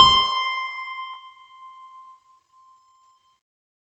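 A skip ahead at 1.13 to 1.15 s makes the music jump forward with no gap. Around 0.4 s of audio was dropped, either lost on the way or discarded when the jitter buffer overflowed while later audio was already queued, so the two sides are joined almost directly.

A jitter buffer speed-up follows from 1.23 to 2.01 s. The buffer was holding more audio than it aims for, and the receiver repeatedly cut out short pitch-period slices, about 70 ms in all. The music plays at 109% speed with its pitch unchanged, so the tempo briefly rushes. The top end stops at 8 kHz, which points to a call codec such as Opus.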